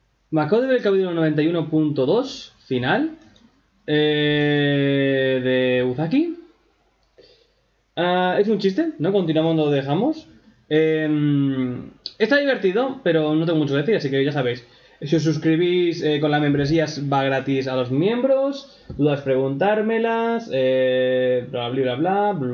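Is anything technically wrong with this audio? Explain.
No, nothing technically wrong can be heard here.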